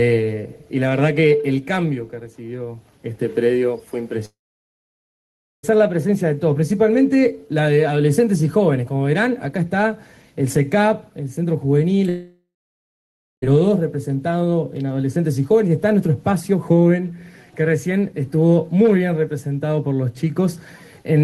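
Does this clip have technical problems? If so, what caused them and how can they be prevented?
Yes. From 4.25 to 5.65 s and from 12.09 to 13.44 s the sound trails into a fading buzz, then goes silent before resuming with a stretch skipped. This is likely a long network dropout, with the receiver concealing lost packets. A more stable network link with redundancy such as forward error correction would prevent it.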